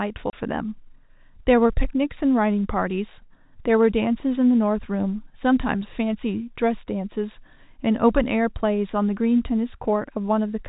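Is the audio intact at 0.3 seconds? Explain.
No, a hard-edged 30 ms hole cuts the speech from 0.30 to 0.33 s: packet loss filled with silence, which fits a single dropped packet replaced by silence.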